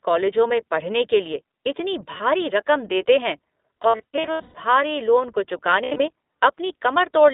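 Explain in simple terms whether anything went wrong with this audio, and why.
Yes. The whole clip went through the iLBC codec, a phone-quality voice codec. It keeps only about 250 Hz to 3.7 kHz, so the speech sounds thin, rough and slightly synthetic.

There are also lost iLBC frames. Audio went missing near 2.18 s, from 3.82 to 4.55 s, and from 5.84 to 6.02 s. The decoder filled each gap with a buzzy, held sound. Clear speech returns right after each gap.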